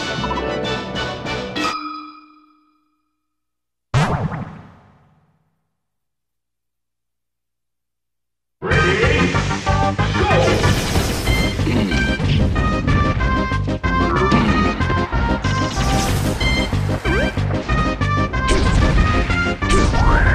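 Nothing here stands out as a technical fault; the audio just rolls along with no glitches, gaps or breakups to point to.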